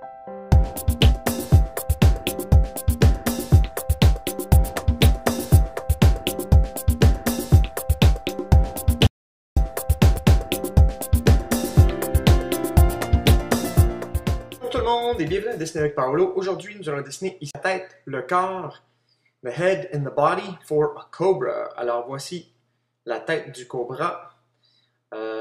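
At 9.07 s the input feed was lost and silence was written in its place until 9.57 s, most likely from a disconnected device, a dropped link or an accidental mute. This audio dropout to silence leaves a gap of about half a second of silence, with no room tone underneath. The sound breaks off abruptly, then resumes just as suddenly, and whatever occurred in that half second is simply missing.

Shortly after, at 10.17 s, a CD skip occurs: the laser lost its track and landed on another turn of the disc spiral, muting for only a couple of milliseconds. It registers as a small tick followed by a jump in the sound's continuity. A second CD skip at 17.51 to 17.55 s involves a longer mute of a few tens of milliseconds, giving a tick before playback carries on from a different point.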